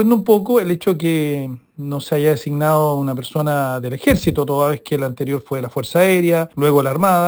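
Throughout the clip, imaging from sample-and-hold upsampling: each sample was simply repeated, with no smoothing filter, which fits a 12 kHz source raised to 44.1 kHz. Mirrored spectra sit about 21 dB down, the lowest spanning 6 to 12 kHz, adding a bright metallic fizz that tracks the sound's level.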